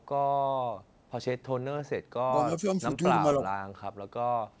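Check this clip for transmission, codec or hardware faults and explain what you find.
The speech dips in level three times, at 2.28 to 2.32 s, 2.6 to 2.8 s and 3.37 to 3.5 s, each briefly, by about 5 dB. These are likely speech suppressed in double talk: with both ends talking at once, the echo canceller couldn't separate this talker from loudspeaker echo and attenuated everything. The band stops at 8 kHz, consistent with a G.722 call path at 64 kbps.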